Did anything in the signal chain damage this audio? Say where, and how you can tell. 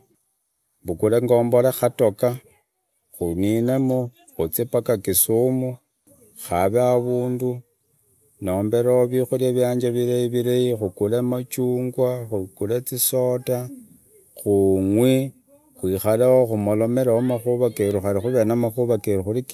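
No, nothing in the signal chain has damaged this speech recording; no stage from capture to playback has left a detectable mark on it.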